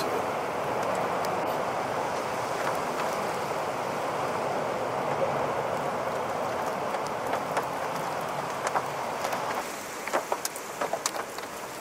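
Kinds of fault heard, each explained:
corrupt frame decoded: damaged compressed frames were decoded and played anyway, misplacing energy across frequencies and causing brief spurious bursts at 1.43–1.46 s and 8.35–8.38 s.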